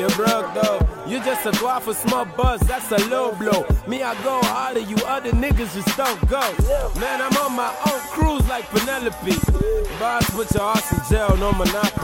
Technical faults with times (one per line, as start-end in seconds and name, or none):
9.38-11.98 train of clicks